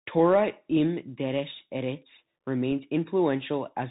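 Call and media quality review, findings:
Bluetooth CVSD headset codec, whole clip. Speech band-limited, nothing above 3.8 kHz; spectrogram shows a hard flat ceiling there. Granular hiss under the speech, scratchy sibilants; the waveform staircases on steep transients as the one-bit up/down step lags. Points to a 64 kbps CVSD link.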